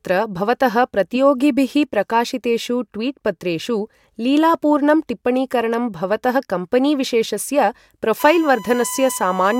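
From 8.20 s to the end at 9.60 s, a steady, fixed-pitch whine at 1 kHz sits under the speech, roughly 15 dB below it. This is USB whine: current drawn in the bus's 1 ms frames leaks through power or ground into the audio path.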